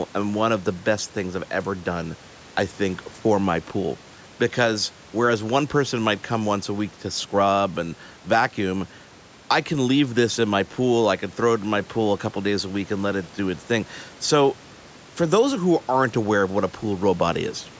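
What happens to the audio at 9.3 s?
Nothing goes wrong at 9.3 s: the audio is intact at that point, with only the room's own background noise sitting well below the speech and the call's microphone processing band-limiting the sound as it normally does.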